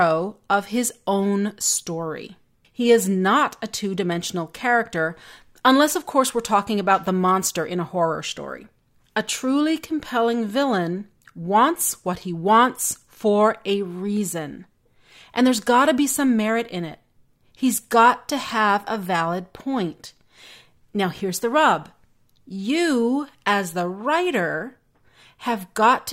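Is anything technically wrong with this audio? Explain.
No, nothing in this speech recording registers as a technical fault to the ear.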